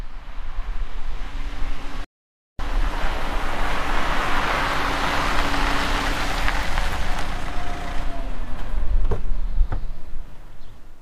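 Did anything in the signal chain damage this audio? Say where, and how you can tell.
Yes, at the playback stage. The sound cuts out from 2.04 to 2.59 s, a gap of about 0.54 s, then picks back up. That's a playback stall, likely the player running dry of data or its thread getting blocked until it recovered.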